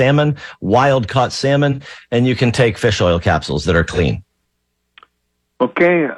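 A speech recording with two brief smeared, noisy patches at 1.71–1.79 s and 3.93–3.99 s. These are AAC frame loss with concealment. Each gap fits a single dropped frame of about 43 ms, which the decoder patched by reusing the last good spectrum.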